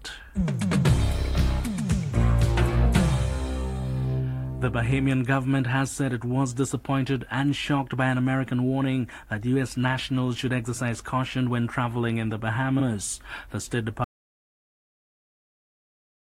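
At 12.79 s there is a brief stutter. This is a repeated frames fault. A short run of compressed frames, about 46 ms long, plays one extra time. That length fits two frames of a typical codec. The decoder simply plays the same slice again. The audio runs 46 ms longer than it should.

At 14.04 s the sound cuts out mid-flow. This is an audio dropout to silence. The gap is dead silence, with no room tone underneath. It never recovers and lasts to the end. The input was likely lost, perhaps through a dropped link or a mute, while the recorder kept writing silence. Whatever happened after 14.04 s is gone.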